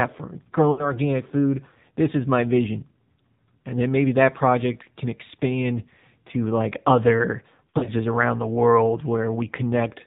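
The speech runs through an AMR narrowband mobile codec for the whole clip. Nothing above 4 kHz survives. The pulse-driven vocal tract model leaves the voice plainly buzzy and synthetic, which fits the low 7.4 kbps mode.

Lost AMR speech frames appear from 0.72 to 0.95 s, about 60 ms of missing audio. The decoder repeated its last good settings at falling gain, so the sound smears into a brief warble and dips.

A second patch of lost AMR speech frames falls between "expand to like other" and "around the world", from 7.70 to 7.90 s. About 100 ms is lost across 160 ms, the longest gap 40 ms. It sounds like a series of brief dips and warbles.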